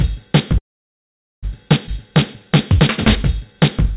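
A recording of everyday sounds carried over a narrowband call path, with nothing above 4 kHz, consistent with G.711 A-law at 64 kbps. From 0.58 to 1.45 s there is a call audio freeze: the last sound trails off briefly, then about 0.82 s of silence follows, likely because delayed packets emptied the jitter buffer. The sound then resumes where it stopped, so nothing is lost, which is what separates it from a dropout. At 1.87 s playback skips ahead, jumping over roughly 0.4 s with an almost seamless join. Unlike the freeze, this removes sound instead of inserting a pause. Jitter buffer slow-down follows from 2.06 to 2.75 s and from 3.21 to 3.95 s, running at about 94% and 95% speed respectively. The receiver repeats tiny pitch-period slices to rebuild its reserve, so sounds stretch out while keeping their pitch, unlike a tape-style slowdown that would lower it.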